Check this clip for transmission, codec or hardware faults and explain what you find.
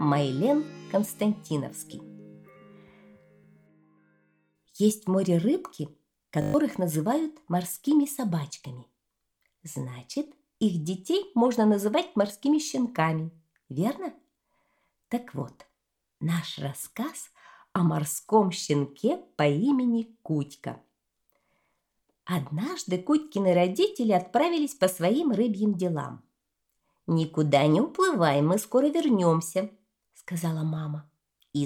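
There's one clear fault. From 6.42 to 6.54 s, a system hang loop: the machine stalled, the hardware kept replaying a 20 ms buffer six times, giving a brief 50 Hz buzz and losing about a tenth of a second of audio.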